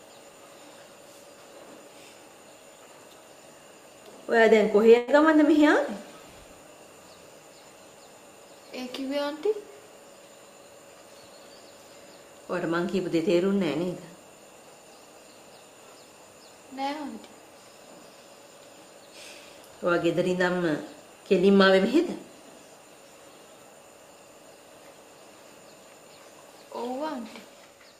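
At 4.97 to 5.09 s there's a burst of packet loss: about 100 ms drops out, the last sound gets stretched and faded, then audio jumps ahead.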